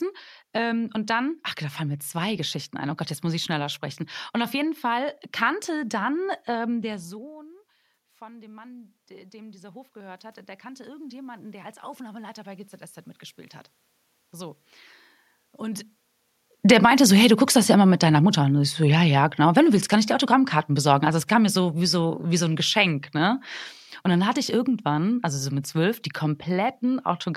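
Around 7 s the speaker seems to back away from the mic, and the level drops by about 21 dB. From 6.86 to 12.78 s you can hear the automatic gain rising as the AGC notices the quieter input and slowly pushes its gain up by about 11 dB. It's a slow swell rather than a jump, and the room noise climbs right along with the voice. That shared lift gives it away as gain riding, not the talker coming back.

Then the reverse happens. The speaker seems to move again around 15.5 s, and from 16.58 to 23.48 s there's automatic gain falling. The AGC winds its gain back down by about 8 dB over nearly seven seconds, so the voice gradually sinks. The background sinks with it, which again points to the gain stage doing the work rather than the person moving.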